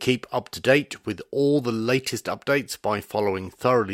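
No technical faults can be heard anywhere in the recording; the signal stays steady and intact throughout.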